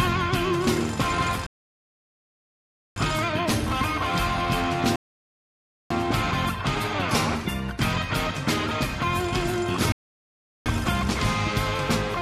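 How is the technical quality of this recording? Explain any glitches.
The playback trips over three rebuffering stalls. At 1.47 s the sound drops to silence until 2.96 s, about 1.5 s; again from 4.96 to 5.90 s, roughly 0.95 s; and from 9.92 to 10.66 s, about 0.74 s. Each time the player ran dry of downloaded audio and simply waited for more to arrive, then picked up at the exact point it left off. So nothing's missing, but those gaps stretch the timeline.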